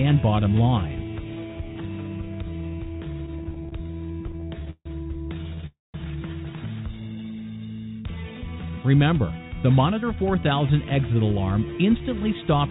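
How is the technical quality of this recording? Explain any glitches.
The recording has three kinds of network-related glitches, all heard through band-limited call audio with nothing above 4 kHz, which fits a narrowband telephone codec such as G.711.

Repeated stalls (stutter) occur from 3.26 to 4.87 s and again from 5.41 to 5.64 s. The sound hitches and drags. The first stretch has 25 small hangs, the longest about 151 ms. The second has four very brief ones. Packets arrived late, so the jitter buffer kept running dry and the receiver stretched the last sound until fresh audio arrived.

A call audio freeze follows at 5.66 to 5.96 s. The sound hangs as a fading continuation that drops to silence for about 180 ms, then resumes where it stopped. The likely cause is a held-up burst of packets that emptied the buffer, inserting a gap of about 0.28 s.

A jitter buffer speed-up runs from 7.88 to 10.24 s. 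The sound plays about 10% fast at unchanged pitch and feels hurried. After the earlier delays, the buffer held too much audio, so the receiver trimmed short pitch-period slices, about 0.3 s in total, to catch up.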